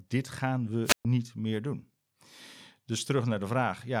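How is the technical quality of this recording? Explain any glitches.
There's one clear glitch, a wireless microphone squelch dropout from 0.84 to 1.05 s, right after "dit gaan". The radio link fades, hiss swells briefly, then the receiver's squelch mutes everything for about 127 ms before the speech comes back at "meer doen".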